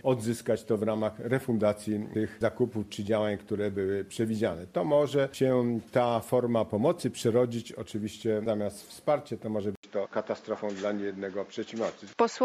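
At 9.75 s the sound drops out for 80 ms, then returns duller, with nothing above 7.3 kHz, a faint new background noise well below the signal, and much the same level. This is likely an input switched to a poorer device, which then runs to the end.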